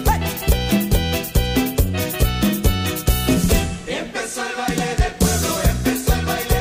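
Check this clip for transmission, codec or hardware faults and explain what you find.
No faults heard anywhere in the clip.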